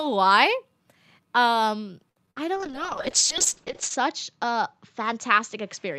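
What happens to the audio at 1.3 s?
Nothing goes wrong at 1.3 s; the speech carries straight through that moment without any dropout, click, glitch or change in level or tone.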